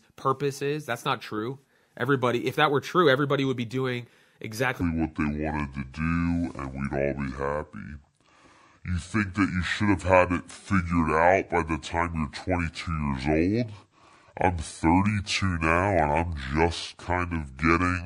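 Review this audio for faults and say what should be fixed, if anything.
From 4.81 s to the end, just before "the feel of it", the speech drops deep and drags, playing at 0.652 times its proper speed and about seven semitones low. This section at the wrong speed was likely played or resampled against the wrong clock, so pitch and tempo fell together. To prevent it, check that every editing and playback stage runs at the recording's own sample rate.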